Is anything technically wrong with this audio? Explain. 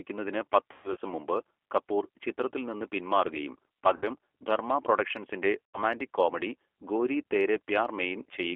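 Yes. Throughout, the speech sounds thin, slightly rough and synthetic, confined to about 300 Hz to 3.4 kHz. This is the G.729 codec at 8 kbit/s, which rebuilds speech from a vocal tract filter, pitch predictor and sparse pulses, discarding everything above the telephone band.

Three dropouts come from VoIP packet loss concealed by the speech codec: 0.72 to 0.97 s before "മുമ്പ് കപൂർ ചിത്രത്തിൽ നിന്ന്" (150 ms lost, longest gap 120 ms), 3.96 to 4.10 s after "കപൂർ ചിത്രത്തിൽ നിന്ന് പിന്മാറുകയും", and 5.65 to 5.79 s before "കോമഡി ഗോരി തേരേ". Each smears into a fading buzzy tone or coloured noise as the decoder extrapolates its last pitch and filter.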